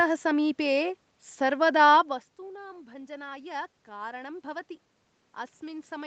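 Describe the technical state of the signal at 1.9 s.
The signal is intact at 1.9 s, with only the talker's level shifting at the microphone around this point and no technical fault present.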